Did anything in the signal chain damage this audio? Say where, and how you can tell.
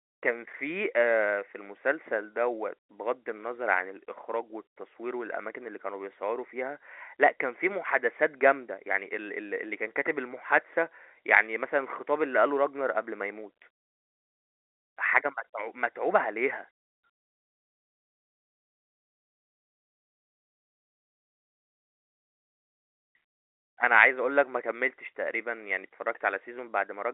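No, no stage in the chain has damaged this speech. It carries the narrow band of G.711 telephone coding, roughly 300 Hz to 3.7 kHz with nothing above about 3.8 kHz, and any coding noise from that path is faint at most.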